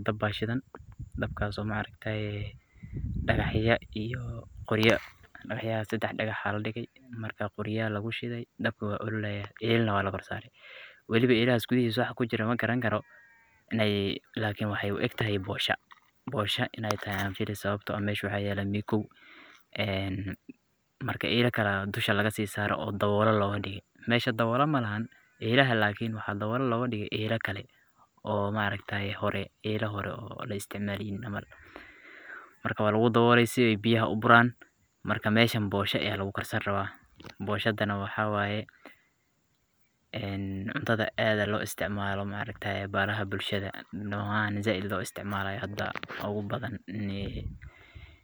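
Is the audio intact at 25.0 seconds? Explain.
Yes, at 25.0 seconds the speech is intact, with no dropout, click, distortion or other fault to be heard at that moment.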